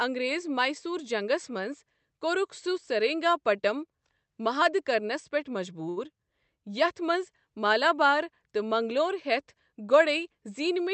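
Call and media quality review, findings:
Short stall from a late packet, 5.89–5.99 s: jitter buffer ran dry; receiver held the last sound about 74 ms, then resumed in place, nothing lost. Slight drag audible.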